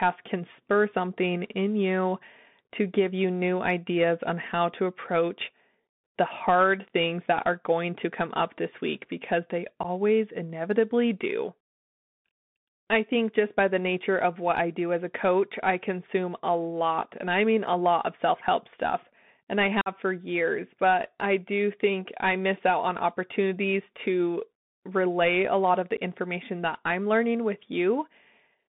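A speech recording heard through a Bluetooth CVSD headset codec: the sound sits between roughly 150 Hz and 3.6 kHz, which fits a 64 kbps CVSD link, and s sounds are scratchy over a granular hiss. On a spectrogram, everything above 3.6 kHz is empty. Unconcealed Bluetooth headset packet loss cuts three abrupt holes: 9.83–9.85 s, after "this week because they", losing about 11.2 ms; 19.81–19.88 s, after "help stuff and I", losing 48.8 ms, around fifteen packets; and 25.97 s, after "relay a lot of", another 11.2 ms. Each gap shows as a flat, near-silent slice with sharp edges in the waveform and a clean vertical band on the spectrogram.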